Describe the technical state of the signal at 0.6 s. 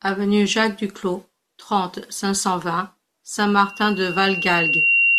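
At 0.6 s the signal is intact, with no audible technical fault in the speech at that point.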